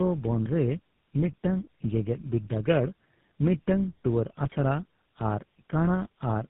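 Speech, carrying tandem speech coding from start to finish. The sound is rough, muffled and warbly, with nothing above 3.8 kHz. That fits three low-rate speech codecs in a row, each re-coding the previous one's damaged output. The last stage sounds like GSM full rate.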